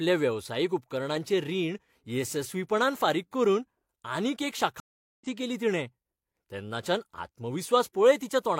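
At 4.8 s the speech cuts to silence for about 0.41 s, then returns at 5.26 s, roughly a fifth of a second further on: a stream reconnect. Unlike a plain dropout, the restarted decoder resumes later rather than where it left off, easing back in.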